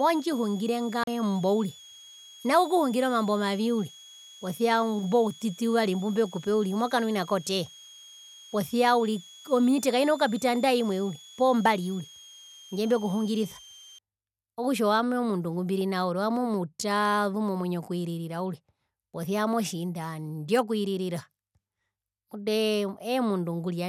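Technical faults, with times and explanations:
0.00–13.98 s, switching supply whistle: A thin, high whistle sits under the speech, its pitch wandering between about 3.2 and 3.5 kHz, roughly 3 kHz on average and well below the speech level, around 25 dB down. It stops just before "okutja owami". A nearby switching power supply is running in a burst mode low enough to be audible, or beating against another supply, so its pitch shifts as the load on it changes.
1.04–1.07 s, CD skip: There is a dropout of roughly 40 ms, after which the speech resumes from a different point rather than where it left off. A knock or a flaw on the disc sent the laser to another turn of the spiral. The player muted while it relocked, then carried on from the new position, so the audio jumps abruptly instead of continuing smoothly.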